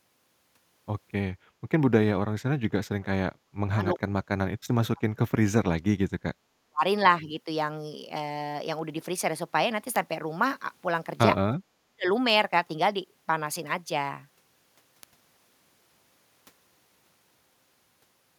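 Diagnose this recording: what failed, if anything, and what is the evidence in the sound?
Converter stage. Word clock ticks run from 0.21 s to 18.16 s, about fifty of them, roughly every 0.4 s. The receiving device is not locked to the sender's clock. A drift of around 50 ppm fits that rate. At each slip one sample is dropped or repeated, and that gives a sharp tick.

Call processing. The background is gated by the echo canceller from 1.51 s to 1.55 s. The room sound dips by about 6 dB for 40 ms and then recovers. The canceller pulled the microphone down hard while the loudspeaker played, then released it.

Call processing again. The speech drops deeply, by around 40 dB, from 2.16 s to 6.09 s, from 6.37 s to 6.84 s, and from 11.77 s to 12.07 s. This is likely speech suppressed in double talk. The canceller could not tell the near talker from the loudspeaker echo, so it attenuated both.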